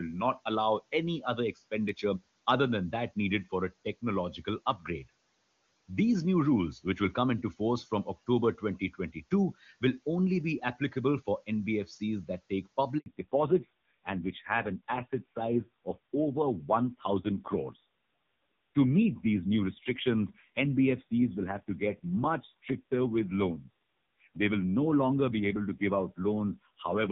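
Speech cut by the noise suppressor occurs between 8.80 and 9.32 s, just before "will only be applicable". The suppressor mistook brief stretches of the speech for background and turned them down along with it, by about 11 dB at the deepest point. The affected moments total about a tenth of a second, so soft sounds come across swallowed and faint rather than fully missing.

A handover gap follows at 12.98 s, right after "that take", and lasts 80 ms until 13.06 s. While the call moved between networks, no speech frames came through. The sound fades out within a few tens of milliseconds and stays silent until the new link takes over. Whatever was spoken in that gap is gone, leaving a short hole in the flow.

Fallback to narrowband starts at 13.06 s, also after "that take", and continues to the end. Before that point, the wideband HD Voice coding at 23.85 kbit/s carries the speech cleanly. 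From 13.06 s on, nothing above 4 kHz remains. The voice turns muffled, duller and rougher, which points to a low-rate narrowband codec such as AMR-NB at 5.9 kbit/s. The room noise sits about 27 dB below the speech throughout.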